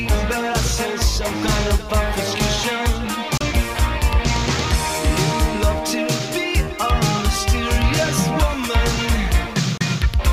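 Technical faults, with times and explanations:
3.38–3.41 s and 9.78–9.81 s, digital broadcast dropout: two brief holes of about 32 ms each, where the receiver muted over what sounds like a single bad frame, so that bit's just gone.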